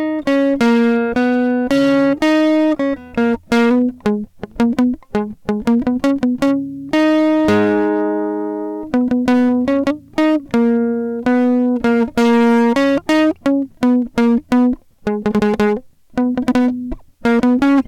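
A harsh, gritty fuzz rides on every loud passage of the music from start to finish. This is hard clipping: the signal was driven about 13 dB past what the stage could pass, so roughly a tenth of the samples have their peaks sliced flat, spraying high harmonics across the spectrum.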